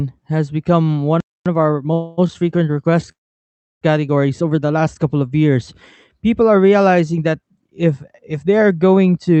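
Just after "has become one", at 1.20 s, the speech cuts out into silence for about 0.25 s and then resumes where it left off. This is a playback stall, likely caused by the player running short of data or its thread being blocked, so nothing reached the output until it recovered.

From 1.46 s to 4.96 s, up to "couple of years", the speech runs hurried, about 1.1 times normal speed, at unchanged pitch. This is time-compressed catch-up. After the stall, the player trims its backlog by cutting out and cross-fading small slices of audio, which keeps the pitch steady but makes the delivery rushed.

Inside that hurried stretch come two call audio freezes. From 1.93 s to 2.28 s the sound stretches into a fading buzz for about 0.24 s rather than dropping out. Then the speech carries on with nothing lost. From 3.11 s to 3.83 s the hold lasts about 0.7 s: a brief smeared tail gives way to roughly 0.68 s of silence before the speech continues intact. 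In each case packets were likely held up in transit and the jitter buffer ran dry. The receiver stretched the last sound to fill the wait, which inserts a gap without removing any speech. The call path's Opus codec limits the audio to about 8 kHz.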